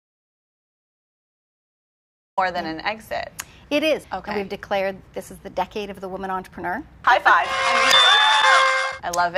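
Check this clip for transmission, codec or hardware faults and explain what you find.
The clip has one fault: an audio dropout to silence from the very start until 2.37 s. The input was already lost when the clip begins, most likely through a disconnected device, failed link or mute, while the recorder kept writing silence. There is no room tone at all, and the sound then enters abruptly mid-flow. On a waveform this is a flat line; on a spectrogram, solid black across every frequency until 2.37 s.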